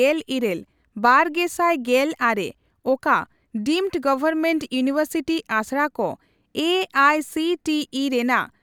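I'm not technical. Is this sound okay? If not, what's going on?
Yes, nothing in this speech recording needs attention.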